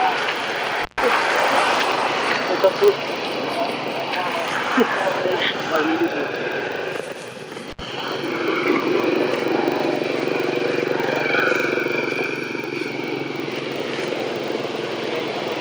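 Right from the start there's a steady 25 Hz buzz riding under the sound, and it rises and falls with the level. That's a filter restarted on every block. The filter drops its memory between blocks and starts each one from silence, so every block opens with a tiny transient. Ticks coming 25 times a second point to blocks of about 40 ms, and at that rate they blur into a buzz rather than separate clicks.

On top of that there are two intermittent contact dropouts, like a loose plug or cable briefly opening. The first runs from about 0.81 to 1.02 s, with the line fully open for roughly 128 ms. The second runs from 7.70 to 7.80 s and is open for about 66 ms. Each time the sound cuts out with a bit of crackle at both edges, and faint hiss is left while the connection is broken.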